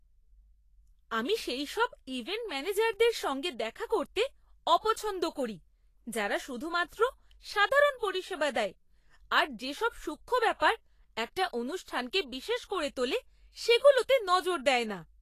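Vorbis compression runs throughout this speech clip, from start to finish, and its damage is plainly audible. The treble sounds hissy and grainy, consonant attacks are smeared, and nothing reaches above about 14.2 kHz. The likely cause is a low-rate Vorbis encode, around 33 kbps, in which the codec coarsely quantised the high-frequency residue over its smooth spectral floor. Fine detail there was replaced by noise of similar energy, and the band edge was lowered.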